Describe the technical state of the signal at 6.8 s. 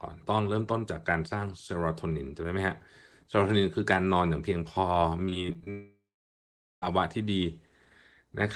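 At 6.8 s the signal is silent, near the end of a gap from 5.70 to 6.84 s. The last sound is drawn out as a brief fading buzz before roughly 0.8 s of silence, and speech returns at 6.84 s with the lost portion missing. This is likely a long network dropout, with the receiver concealing absent packets.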